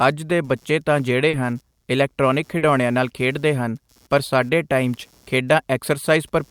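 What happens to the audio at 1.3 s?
A brief smear in the speech runs from 1.29 to 1.35 s: short concealed packet loss. About 40 ms of audio never arrived in time, so the receiver stretched the preceding sound across the gap and then blended back into the real signal. Underneath, a faint buzz pulsing at around 150 times a second, roughly 40 dB below the speech, continues through this moment. It is computer activity noise, where processor or peripheral load shifts the audio circuit's shared ground.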